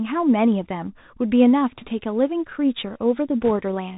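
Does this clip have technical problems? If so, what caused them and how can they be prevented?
Yes. Throughout, the speech sounds boxed-in and narrowband, with scratchy s sounds and a granular hiss underneath, the mark of the Bluetooth CVSD headset codec. It codes one up-or-down bit per sample, which fits a 64 kbps link. Its adaptive step lags behind fast, loud high content, and nothing above 4 kHz survives. Using a wideband headset profile such as mSBC or LC3 instead of CVSD prevents this.

From 1.75 to 1.91 s and again from 3.41 to 3.51 s, a brief rushing, crackly noise rides over the speech, rougher in the second burst. These are bit errors on a Bluetooth voice link. Roughly 1 percent of bits flipped in the first burst and somewhat more in the second. Because each CVSD bit carries little weight, the errors smear into noise rather than loud clicks. Keeping the headset close to the phone, away from Wi-Fi and other 2.4 GHz interference, prevents them.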